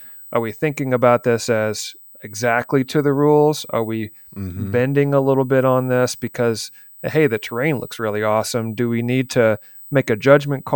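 Running under the speech from start to finish is USB whine, a thin, steady high-pitched tone that never shifts in pitch. It sits at 8 kHz, with its strongest energy on the 16 kHz harmonic, roughly 25 dB below the speech. That 8 kHz spacing matches the bus's 125 microsecond microframes: each burst of current draw leaks onto the power or ground line and ends up in the audio path as this constant whine.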